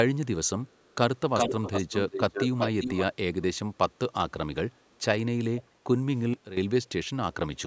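Echo leak appears from 0.67 to 0.93 s as a very faint copy trailing by about 0.45 s, again from 1.17 to 3.04 s as a repeat about 0.39 s late at roughly the level of the speech, and from 5.59 to 5.63 s as a brief, quieter scrap about 0.44 s late. The likely cause is a far-end echo canceller passing loudspeaker pickup back into the call.

A sudden gain jump follows from 6.34 to 6.57 s. Speech and background noise both drop abruptly by about 12 dB and then return, likely from a gain change applied without a ramp.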